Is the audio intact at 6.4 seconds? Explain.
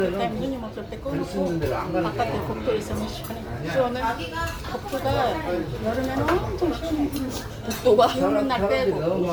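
No. Generation loss runs through the whole clip, including 6.4 s: the sound is swirly, smeared and hollow, with blurred attacks and nothing above 19.9 kHz. The likely cause is about ten rounds of MP3 decoding and re-encoding at 128 kbit/s, each adding fresh quantisation noise and spectral holes.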